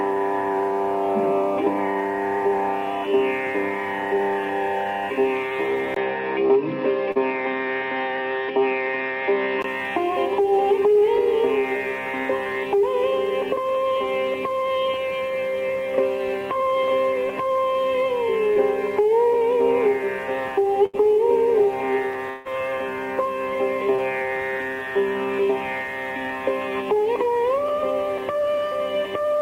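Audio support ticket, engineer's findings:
Input switched to a poorer device, 5.94 to 9.64 s: sound goes dull, nothing above 5.5 kHz, with a 20 ms gap at the cut-over. Likely a mid-call mic or headset profile swap. Level holds steady, but a faint new noise floor appears, roughly 45 dB down.

Short concealed packet loss, 7.11 to 7.18 s: about 40 ms smeared over by the receiver continuing the last sound, then blending back. Brief wobble on top of the dull stretch.

More short concealed packet loss at 18.54 s and 23.96 s: 20 ms holes each, filled from the preceding sound. They come through as quick smears.

Burst of packet loss, 20.86 to 20.95 s: about 80 ms gone in a run. The concealment holds the last sound and turns it down as the gap goes on, so you get a held buzz or fading hiss. Playback resumes past the missing chunk.

Long network dropout, 22.30 to 22.47 s, though it's on the short side for one: 0.16 s never played. 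The fill covers nearly all of it as a decaying buzz or hiss with no silent stretch, then audio picks up further on. A network stall is the likely cause.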